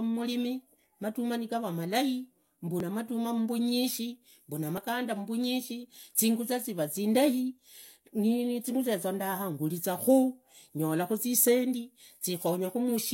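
At 2.80 to 2.83 s, right after "matamaa nigurua malai", the speech skips. The same happens at 4.78 to 4.80 s, after "madumaa mbunyishi mbuna". Both are overlaps between stream segments. Adjacent segments claimed the same stretch of time, so the player discarded about 22 ms of audio that was never doubled. The waveform jumps across the gap. The two events are about 2 s apart, which fits segments of that length.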